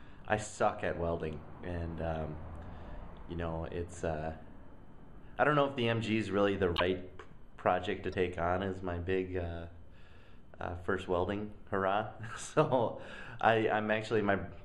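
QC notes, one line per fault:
6.75–6.81 s, broken MP3 bit reservoir: a short glitch of about 50 ms, with the sound jumping forward. The likely cause is missing frames. Each MP3 frame can borrow bytes stored in earlier ones, so after the gap the decoder pulls someone else's data. The length fits about two frames of roughly 26 ms.
8.11–8.14 s, broken MP3 bit reservoir: a briefer glitch of about 30 ms, likely the same borrowed-data mismatch, and it fits a single 26 ms frame decoded from the wrong bytes.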